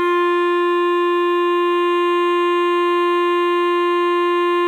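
Listening to the music, nothing stood out as a technical problem at any point.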